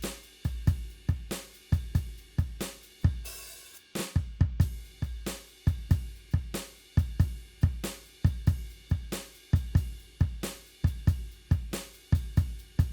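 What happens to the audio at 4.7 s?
Nothing goes wrong at 4.7 s; the music plays through that moment intact, with no dropout, click, glitch or other fault.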